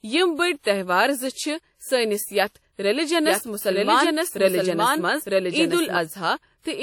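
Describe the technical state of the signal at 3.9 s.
At 3.9 s the speech carries two faults. The first is WMA compression, present across the whole clip. The damage is plainly audible: a ringing, washy smear with hiss that rises and falls with the voice. Nothing reaches above 18.6 kHz. The likely cause is a transform codec run with long blocks. Its quantisation noise spreads over tens of milliseconds. At a low rate, which fits roughly 48 kbps, weak spectral lines drop out.

The second fault is a doubled audio track, running from 3.26 s to 5.98 s. A full-band second copy of the speech plays about as loud as the original. It trails by around one second. It has no decay and no room colour, so it sounds like a separate layer rather than an echo. It begins and ends abruptly. The likely cause is a second capture through a slower path, or an edit holding two copies out of step.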